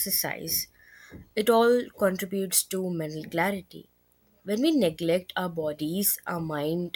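Right from the start and all the way through, there's video or display buzz under the speech. A screen or video cable is leaking into the audio path, so you get a buzz locked to the 59.94 Hz field rate, with a fizzy hash riding on top. There's also a thin, very high whine at the 15.7 kHz line rate. It all sits roughly 40 dB below the speech, so it's faint but constant.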